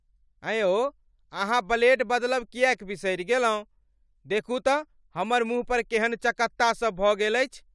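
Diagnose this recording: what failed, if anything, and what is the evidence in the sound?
Nothing failed in this recording, and the sound gives no evidence of a fault at any stage.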